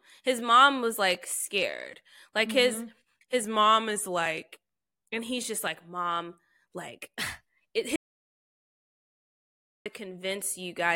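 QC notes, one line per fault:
3.44–4.49 s and 7.21–7.76 s, drift correction step: the speech slows by 6% and drops about 108 cents, then later speeds up by 6% and rises about 101 cents, each snapping back. Speed and pitch move together, roughly a semitone, likely from clock-matching software stepping the playback rate to rebalance its buffer.
7.96–9.86 s, audio dropout to silence: the speech cuts off mid-flow into about 1.9 s of silence with no room tone, then resumes abruptly. Whatever was said in the gap is lost, likely because the input dropped while the recorder kept writing silence.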